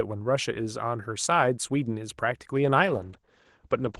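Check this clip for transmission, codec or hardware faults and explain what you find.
One transmission fault is audible: a call bitrate drop near the end of this speech clip, sent over an Opus call path.

From 2.86 s to the end, about 1.14 s, the sound turns muffled and rougher. The call's bandwidth estimate fell, so the encoder got far fewer bits. Coding became coarser, and the top band narrowed from 12 kHz to 8 kHz. This fits a fall from roughly 32 to 12 kbps.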